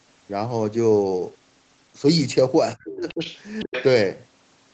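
Speech suppressed in double talk from 2.76 to 3.21 s: the speech sinks by roughly 35 dB in pieces totalling around 400 ms. This is likely an echo canceller that could not tell its own talker from loudspeaker echo and turned both down.

Other side's voice leaking through from 2.93 to 3.41 s: a second voice sits roughly 15 dB under the speech, probably far-end audio from the loudspeaker that the canceller left in the microphone signal. It returns from 3.59 to 3.85 s, now only about 10 dB below.

Speech suppressed in double talk again from 3.64 to 3.73 s: a brief gap of around 100 ms, with a drop of roughly 40 dB, likely as the canceller clamps down while that leaked voice is present.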